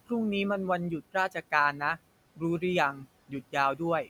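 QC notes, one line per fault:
Throughout: noise suppressor artifacts. The suppressor estimates the steady background and turns those bands down frame by frame, by about 18 dB. The room noise, about 19 dB below the speech, drops away in the gaps and comes back up underneath each phrase.
2.93 to 3.07 s: speech cut by the noise suppressor. For around 150 ms the suppressor mistakes part of the speech for background and attenuates it along with the noise, by up to about 7 dB, so that stretch sounds swallowed and faint.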